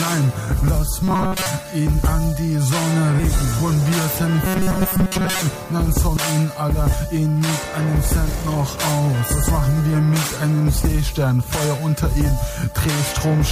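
From 1.03 to 1.46 s and again from 4.46 to 5.41 s, the sound turns into a rigid metallic buzz pinned at 188 Hz. This is robotic sound from repeated short buffers, likely caused by late-arriving audio being covered by looping a chunk of about 5.3 ms for most of each stretch. Unlike a dropout, there is no silence, and unlike codec warble, the pitch stays fixed while the sound's overall shape still roughly carries through.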